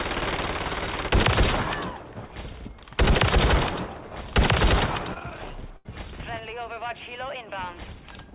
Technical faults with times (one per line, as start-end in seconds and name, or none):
5.14-5.17 short concealed packet loss
5.77-5.86 burst of packet loss